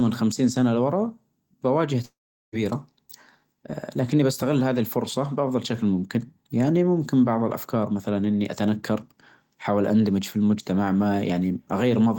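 From 2.05 to 2.55 s the speech smears into a fading buzz, then 0.39 s of silence. Unlike a brief glitch, 0.48 s never returns, likely from a long network dropout.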